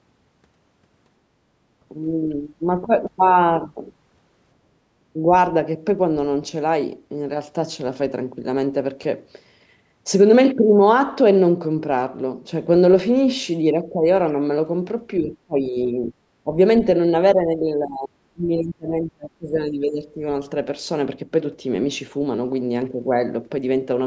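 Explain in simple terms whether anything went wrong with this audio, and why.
The voice gets turned down in places, most likely by speech suppressed in double talk: when two people on a call talk at once, the echo canceller can mistake the local talker for loudspeaker echo and lower both. Here the voice dips slightly around 13.83 to 14.05 s, fades noticeably from 15.19 to 16.13 s and again briefly at 16.44 to 16.57 s, then drops almost to silence in pieces from 17.34 to 20.21 s.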